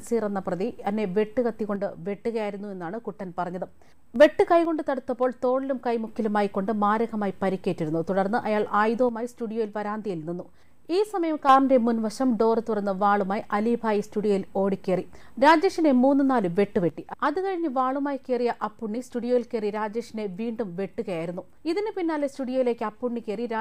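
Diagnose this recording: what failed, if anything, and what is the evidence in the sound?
The level drops abruptly by about 6 dB four times: 1.76 to 4.16 s, 4.65 to 6.07 s, 9.09 to 11.49 s, and from 16.9 s through to the end. Each step is sudden, with no fade. That points to one channel dropping out, likely an intermittent cable or connector in the analogue wiring. With one side gone, the mono sum carries only half the shared material, and anything unique to that channel vanishes.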